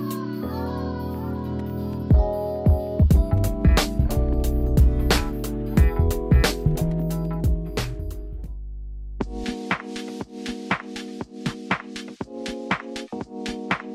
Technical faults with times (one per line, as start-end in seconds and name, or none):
3.37-9.44 mains hum